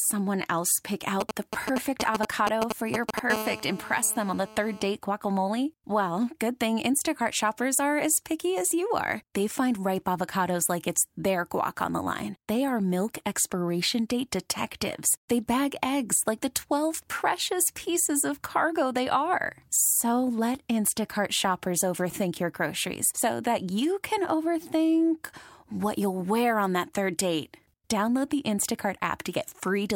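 From 1.21 to 3.19 s there are GSM signalling bursts, galloping ticks and brief 217 Hz buzzes roughly as loud as the speech, from a nearby phone's radio pulses getting rectified. Then, 3.30 to 4.86 s, a steady GSM phone buzz takes over, a raspy 217 Hz drone about 11 dB under the speech, as if that phone had gone into a call.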